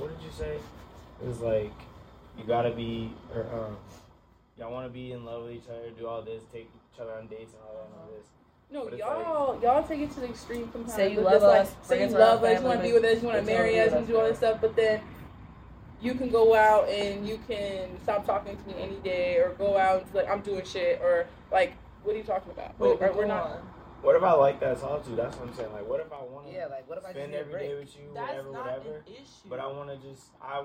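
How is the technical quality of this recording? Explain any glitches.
Two glitches stand out, both zipper noise. From 9.16 to 9.60 s, a rise in level of roughly 15 dB carries a fast ticking, and the same rough zipping returns from 25.64 to 26.31 s as the level drops by about 15 dB. Instead of gliding, the gain jumps in 2 dB steps, somewhere around fifteen a second, with no smoothing between them. Each abrupt jump puts a small click into the waveform, and the string of clicks rides on the sound as a zipper-like rasp.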